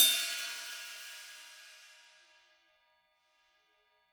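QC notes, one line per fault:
Throughout: block size mismatch (padded). Each block arrives slightly short and is topped up with zeros, putting a brief gap in every block. This produces a steady 43.1 Hz buzz, which fits 1024-sample reads. The sound runs at 0.999 speed with unchanged timbre.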